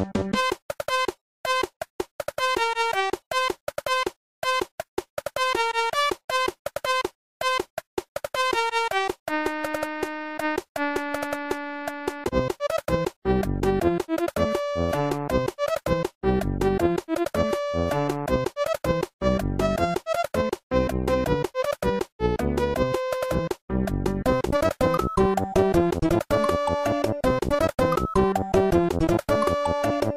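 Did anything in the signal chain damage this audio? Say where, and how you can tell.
No, nothing in the signal chain stood out as damaging this audio when I listened to it.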